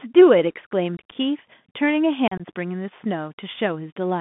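A speech recording carried over a Bluetooth CVSD headset codec, with plainly audible codec damage throughout. The band runs from about 150 Hz to 3.5 kHz, so nothing above that survives. The one-bit delta modulation, which fits a 64 kbit/s CVSD link, cannot track fast, loud high-frequency movement with its adaptive step. Sibilants come out scratchy and slope-overload distorted, and a granular hiss sits under the speech.

Two bursts of unconcealed Bluetooth headset packet loss interrupt it. From 0.97 to 1.15 s, about 97.5 ms of audio is missing across 180 ms, with the longest gap 45 ms. The pattern points to roughly fifteen dropped packets. From 2.28 to 2.42 s, 60 ms is lost across 120 ms, with a longest gap of 37.5 ms. Each hole has abrupt edges, which makes the speech sound chopped and crackly there.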